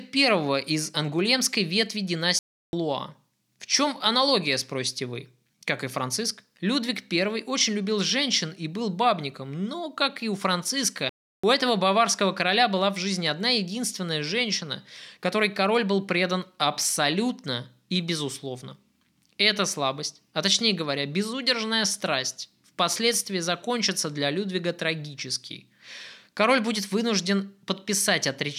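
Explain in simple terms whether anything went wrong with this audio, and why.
The speech drops out completely twice, from 2.39 to 2.73 s and from 11.09 to 11.44 s, each gap about a third of a second. This is a block of digital silence: the program likely missed refilling its output buffer in time, which fits a 16384-sample buffer.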